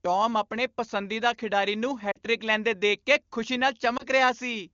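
Lost AMR speech frames at 2.11–2.18 s, after "ਆਪਣੇ ਪਸੰਦੀਦਾ ਖਿਡਾਰੀ ਨੂੰ", and 3.97–4.05 s, after "ਦੇਖ ਕੇ ਖੁਸ਼ੀ ਨਾਲ". The decoder stands in for corrupted frames by reusing the last good settings at fading gain. This gives a drop to near silence of about 40 ms, fitting two 20 ms frames, and then a brief dip of 20 ms.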